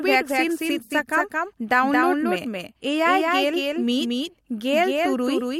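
Speech clip with a doubled audio track throughout: a full-band copy trails roughly 200 ms behind, about 5 dB quieter and without room colour, likely from a second, slower capture path. AAC frame loss with concealment occurs at 0.84 to 0.91 s, where about 64 ms of audio, consistent with three lost frames, becomes a brief smeared, phasey patch.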